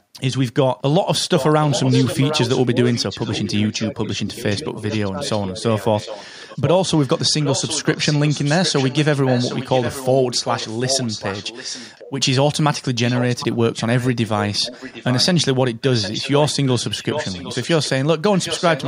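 A speech recording in which the far end's echo canceller likely left part of its loudspeaker pickup uncancelled and returned it down the line. The result is echo leak: a delayed copy of the speech trailing the original by about 0.76 s, roughly 10 dB quieter, audible from 1.37 to 12.11 s, again from 13.05 to 15.26 s, and from 15.93 s to the end. Within that first stretch, the same canceller likely failed to tell its own talker from the returning echo while both were active and turned everything down. This is speech suppressed in double talk. The speech dips briefly between 2.71 and 3.21 s, 3.78 and 4.64 s, and 5.11 and 5.63 s. Each dip lasts a fraction of a second, and the deepest is roughly 15 dB, with the middle one much shallower.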